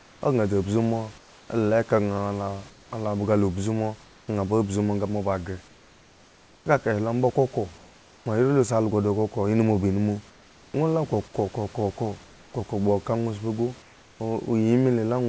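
From 0.00 to 4.28 s, 5.68 to 8.26 s, 10.30 to 10.74 s and 12.24 to 14.20 s, comfort noise replaces the background in pauses, likely from discontinuous transmission. The receiver substitutes a steady, featureless hiss, about 3 dB quieter in the third gap.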